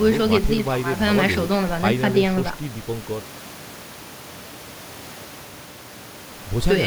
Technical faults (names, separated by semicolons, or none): none